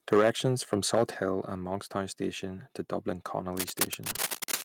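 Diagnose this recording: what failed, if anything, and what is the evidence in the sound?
Microphone overload, 0.12 to 0.46 s and 0.73 to 1.03 s: the loudest speech peaks are flat-topped with a harsh crackle, overshooting full scale by about 7 dB and then about 5 dB. A small share of samples is squared off, which points to input gain set too high at the converter.

Microphone volume stepped down, at 0.13 s and at 1.14 s: speech and background drop abruptly, by about 2 dB and then about 6 dB. This is likely call processing reacting to the clipping by cutting the device's input gain in single steps.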